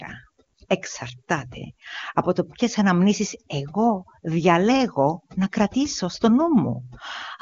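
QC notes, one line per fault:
throughout, overdone noise removal: noise reduction set far too aggressively cuts individual frequency bands whenever they sit near its noise estimate, taking quieter speech detail with them, so the background drops and breaks up into twinkling specks.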